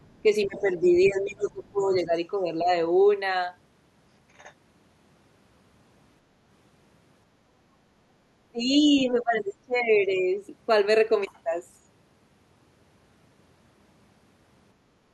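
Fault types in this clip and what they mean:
Other side's voice leaking through: The echo canceller likely failed to fully remove the far end's voice picked up from the loudspeaker. Faint scraps of that second voice surface in the first two seconds, roughly 20 to 35 dB below the talker.
Speech suppressed in double talk: With both sides talking at once, the echo canceller likely mistook the talker for echo and turned everything down. The talker's voice dips by up to about 20 dB, around 0.5 to 2.1 s and again from 8.5 to 10.4 s.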